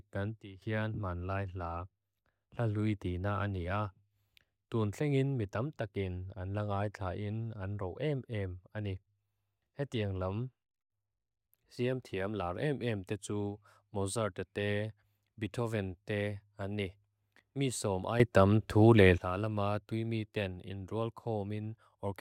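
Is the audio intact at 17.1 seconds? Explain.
Yes, at 17.1 s the speech plays through intact, with no dropout, click, distortion or other fault.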